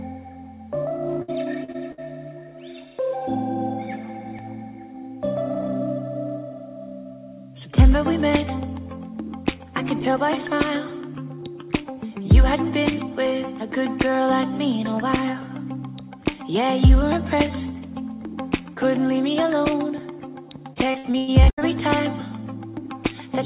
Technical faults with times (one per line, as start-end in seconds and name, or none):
1.22-2.00 repeated packet loss (robotic sound)
20.74-21.63 repeated packet loss (robotic sound)